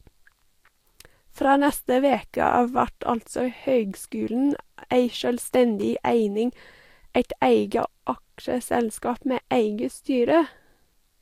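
It's a speech clip with one electrical switching spike, a quick snap at 5.81 s that sits on top of the speech rather than replacing any of it. It's over in a few milliseconds. The likely cause is a nearby switch, motor or static discharge throwing off a brief arc that the audio line picked up, which is why it lands as a sharp snap layered over the sound.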